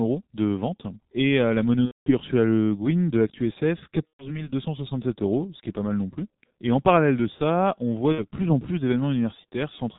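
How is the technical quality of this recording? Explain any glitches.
The recording sounds poor throughout, and three short glitches interrupt the speech.

For the whole clip, the speech is muffled and hoarse with blurred consonants. This is heavy G.723.1 codec damage at about 6.3 kbit/s, which removes everything above 4 kHz and tracks the voice only coarsely.

At 1.86 to 2.12 s, just after "euh la", at 4.07 to 4.49 s, and at 8.12 to 8.24 s, between "de ça on voit" and "plus en plus", the sound smears into a fading buzzy tone or coloured noise and then recovers weakly. This is VoIP packet loss concealed by the speech codec: the decoder stretches its last voice model while lowering the gain. The gaps point to roughly 210 ms, 120 ms and 60 ms of missing audio.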